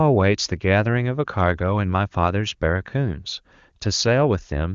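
This speech clip has nothing technically wrong with it.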